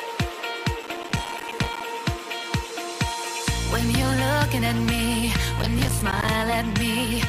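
From 0.83 to 1.81 s and again from 5.59 to 6.28 s there's processor overload crackle: missed buffers of around 5 ms drop to silence, tearing the sound into gritty bursts.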